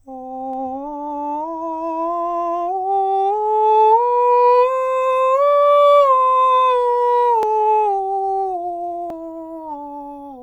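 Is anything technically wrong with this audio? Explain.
Yes. A dropped buffer (overrun) at 0.53 s, 7.43 s and 9.10 s: the music jumps forward with no gap, roughly 20, 70 and 50 ms missing. Likely the program fell behind and the hardware overwrote unread samples, splicing the remaining audio together.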